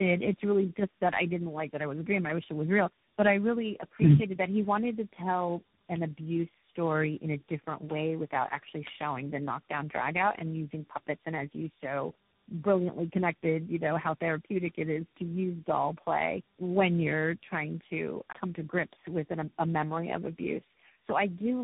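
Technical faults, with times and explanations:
Throughout, tandem speech coding: the call passed through three speech codecs in a row, decoded and re-encoded at each hand-off, so every coder worked on the previous one's damage. Nothing is left above 3.8 kHz, and the speech sounds rough, muffled and warbly, which fits a low-rate CELP chain ending in CVSD.
2.30 s and 5.96 s, bit error spike: a single bit flipped in memory or on the digital path, throwing one sample off by a power of two before it snapped back. Each is a sharp, broadband tick unrelated to the speech, after "it was a dream" and after "to tell".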